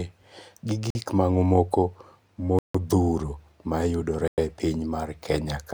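A likely Bluetooth stall, with interference holding up the wireless packets so the headphones' buffer ran empty and playback paused until they arrived, interrupts the speech three times. Each shows up as an abrupt drop to silence before the sound returns: from 0.90 to 0.95 s (48 ms), from 2.59 to 2.75 s (157 ms), and from 4.28 to 4.38 s (101 ms). The longest gap is the one near the middle.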